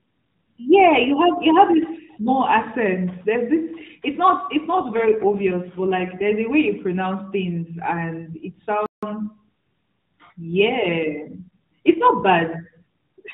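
From 4.72 s to 6.26 s, after "it's not it's" and up to "a way", an AMR rate drop roughens the speech. The bandwidth stays unchanged and there is no gap, but the voice turns buzzier and more synthetic, consistent with the AMR-NB codec stepping down from 12.2 kbps to about 5.9 kbps.

At 8.86 s a playback stall cuts the sound off mid-flow for about 165 ms before it resumes. The likely cause is the player running short of data or its output thread being briefly blocked, leaving the output silent until it recovered.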